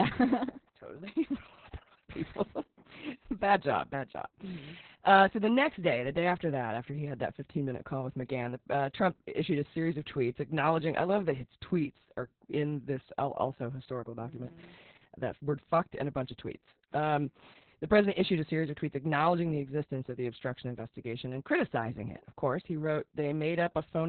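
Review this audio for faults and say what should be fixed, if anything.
Opus voice compression runs through the whole clip, with heavy damage. The coder appears to be in its SILK linear-prediction mode squeezed to narrowband, which fits a bitrate around 6 kbps, so nothing above 4 kHz survives and the excitation is coded very coarsely. The speech sounds muffled and hoarse, with a slightly robotic, buzzy edge, and consonants lose their crispness across the whole recording. To prevent it, encode at a substantially higher Opus bitrate so the coder keeps wideband or fullband audio.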